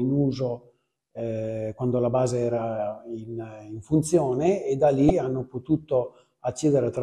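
At about 5.07 s there's a quick blip, lasting roughly 30 ms until 5.10 s, that comes from damaged data in the compressed stream. Data there was corrupted, so the decoder misread those frames, lost sync and had to hunt for the next valid frame header.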